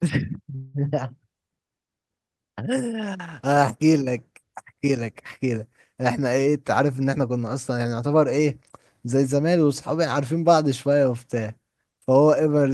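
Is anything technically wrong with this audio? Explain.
Yes, there are two faults.

From 0.55 to 0.76 s the sound stalls and the last moment is stretched into a fading buzz for about 188 ms. The audio then picks up where it left off, so nothing is lost but everything after arrives later. This is a call audio freeze, likely from delayed packets draining the jitter buffer.

From 6.47 to 8.47 s the speech runs hurried, about 109% of normal speed, while the pitch stays unchanged. This is a jitter buffer speed-up. The receiver had too much audio queued and trimmed pitch-period-sized slices, roughly a fifth of a second in all, to catch up.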